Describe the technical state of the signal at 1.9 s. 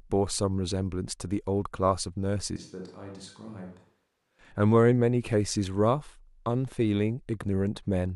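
At 1.9 s the signal is intact, with no audible technical fault at that moment.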